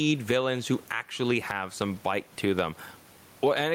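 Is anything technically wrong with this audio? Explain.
Yes, gain pumping runs through the whole speech clip. The room noise, about 39 dB below the speech, swells roughly 15 dB in pauses and ducks under each loud syllable, likely from excessive gain driving a fast limiter. Unlike a noise gate, the background never cuts out; it breathes.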